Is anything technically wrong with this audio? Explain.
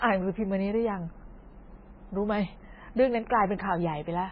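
Yes, two faults. Throughout, heavy MP3 compression, likely at a very low bitrate near 16 kbps, removes everything above 5.2 kHz and drops weak frequency lines frame by frame, leaving the speech muffled, watery and swirly. From 1.11 to 1.28 s, chunks out of order: an 85 ms block arrives one chunk late and plays after its successor, so that moment sounds jumbled.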